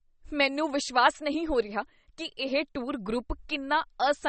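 Throughout the speech, nothing sounds above 8.3 kHz and the s sounds turn watery and swirly with metallic chirps, likely MP3 compression at a starved bitrate near 32 kbps. A spectrogram shows a hard ceiling at 8.3 kHz and weak bands flickering on and off between frames.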